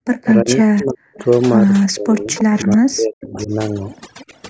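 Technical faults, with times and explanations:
Throughout: overdone noise removal. The background sits at near silence but is sprinkled with twinkling specks, and the speech has its quieter detail hollowed out. This comes from noise reduction set too aggressively. Individual frequency bands that came close to the tool's estimate of the noise were pushed far down or switched off, and the soft low-level parts of the speech were removed along with the noise.
0.05–1.25 s, 1.85–2.65 s, 3.42–3.47 s and 4.19–4.39 s: echo leak. A faint delayed copy of the speech trails it by about 0.31 s. It sits about 15 dB below the direct sound in the first two stretches and about 25 dB below in the brief scraps at 3.42 s and 4.19 s. The likely cause is a far end playing the call over a loudspeaker, where its echo canceller failed to remove everything the microphone picked up and sent the remainder back.
0.42–1.14 s, 1.88–3.51 s and 4.28–4.34 s: speech suppressed in double talk. 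In the first two stretches the speech sinks sharply, by around 40 dB at its deepest, for most of each span. At 4.28 s there is only a shallow dip of around 10 dB. These dips line up with the echo passages, so the likely cause is both sides talking at once. The echo canceller could not tell the local talker from the loudspeaker echo and turned both down.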